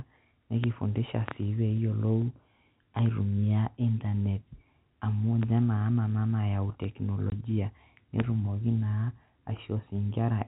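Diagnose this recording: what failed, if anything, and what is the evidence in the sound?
The failure is at the network stage: packet loss filled with silence. At 7.30 s the speech drops out abruptly and returns at 7.32 s, leaving a 20 ms hole with hard edges. A 20 ms gap fits a single lost packet in a 20 ms packetisation scheme. The receiver played silence in place of the missing audio rather than concealing it. The telephone-band G.711 coding carrying the call shows no sign of involvement.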